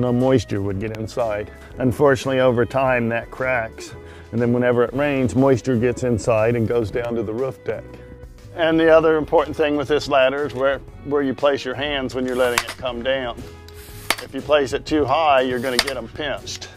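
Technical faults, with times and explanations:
No technical faults, with times and explanations, to report.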